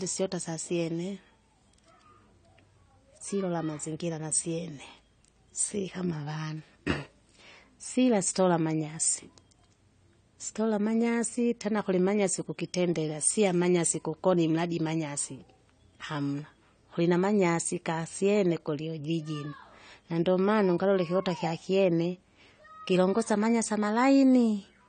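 From start to finish, the speech has the dull, smeared quality of AAC compression, likely AAC-LC run at a low bitrate, with a sound that fits around 32 kbps. Nothing is present above 9 kHz, so the encoder has pulled its bandwidth down to save bits and sibilants lose their edge. The remaining spectrum is coarsely quantised frame by frame, which leaves a plainly audible warbling, fizzy texture on sustained sounds and on the sibilants.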